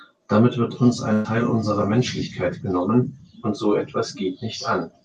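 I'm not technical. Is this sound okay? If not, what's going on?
No. A burst of packet loss hits at 1.13 to 1.27 s, just after "wird uns". Several chunks of the call audio never arrived, so the receiver stretched the last sound into a short fading smear, and about 120 ms of speech is missing when it resumes.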